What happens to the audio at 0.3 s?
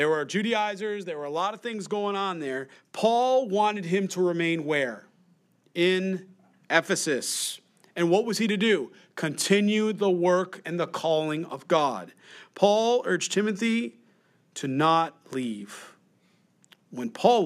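At 0.3 s you're in the middle of some automatic gain falling, running from about 0.05 to 1.19 s. The AGC found the input too hot or its background too noisy and eased its gain down by about 6 dB, so speech and background sink together before "were a lot of".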